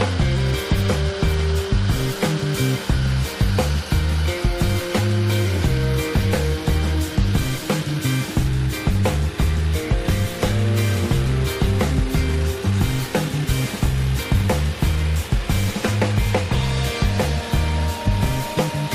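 No technical faults can be heard anywhere in the audio.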